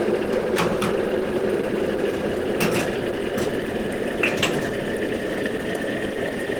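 A short recording of sounds, grainy and rough across its whole length, with a hoarse, muffled texture where tonal parts should be clean and a noisy sheen filling the spectrum up to about 20.4 kHz. This is likely Opus compression at a low rate, consistent with roughly 16 kbps. The encoder has dropped into its hybrid mode, filling bands with folded or noise-like energy instead of leaving gaps, so damage is plainly audible with less swirling than MP3 would give.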